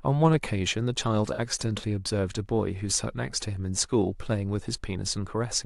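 A corrupt frame concealed appears from 1.33 to 1.40 s in this speech clip. Flipped bits left the decoder unable to trust the data, so it replaced the damaged stretch rather than playing it, either muting it or filling it with a scrambled copy of the last good spectrum. The concealed stretch lasts about 66 ms, a length that fits two lost frames.

A corrupt frame decoded occurs at 3.09 s. Here the decoder did not notice the damage and played a frame whose gains or codes had been misread, placing energy at the wrong frequencies. It is heard as a chirp, squeak, blip or burst of noise lasting roughly one frame, with an error peak of about -25 dBFS.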